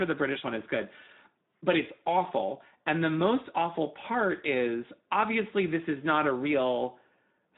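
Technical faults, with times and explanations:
Throughout, Speex codec: the speech has a plainly audible coarse, hoarse and noisy texture, which fits Speex coding at roughly 11 kbps. Speex is a CELP coder. It models the vocal tract with a short-term filter and drives it with a codebook excitation. At this rate the excitation gets too few bits to match the real waveform, so the residual error comes through as rasp and graininess rather than clean harmonics.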